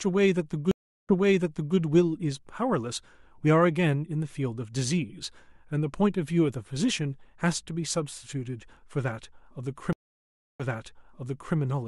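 Stream reconnects at 0.71 to 1.77 s and 9.93 to 11.56 s: the connection dropped, leaving 374 ms then 667 ms of silence, and a fresh decoder restarted mid-stream. The speech picks up 680 ms and 960 ms earlier, repeating what had just been heard.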